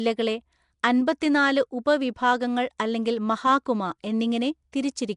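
Speech sounds rough and hissy throughout, smeared and underwater, with nothing above 10.6 kHz. This is likely Nellymoser compression noise-filling starved bands, consistent with a 44 kbps stream.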